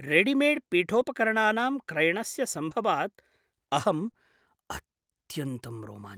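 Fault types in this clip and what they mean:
Lost packet rebuilt from error correction: a dropped packet was replaced by the low-bitrate copy carried in the following one, so there is no gap, only brief rougher, noisier patches at 0.95–1.01 s (about 40 ms), near 2.71 s and near 4.07 s.
Short concealed packet loss: about 20 ms of audio arrived too late twice, and the decoder filled the hole by extending the preceding sound and blending back. This is heard as short smears around 2.69–2.73 s and 4.11–4.15 s.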